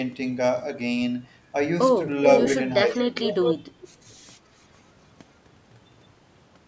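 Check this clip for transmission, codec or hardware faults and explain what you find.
There's one fault here: echo leak, heard three times, from 2.27 to 2.48 s, 3.23 to 3.54 s and 3.81 to 3.88 s. A copy of the speech comes back roughly 0.43 s late, the first two about as loud as the original, the last much fainter. It's likely a speakerphone's echo canceller letting part of what its microphone picked up slip back into the call.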